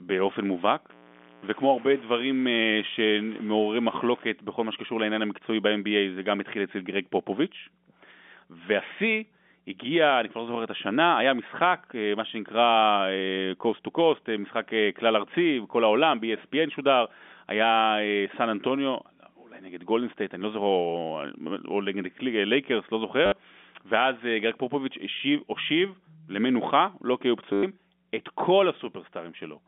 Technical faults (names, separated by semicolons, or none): mains hum; low bit depth without dither; packet loss with last packet repeated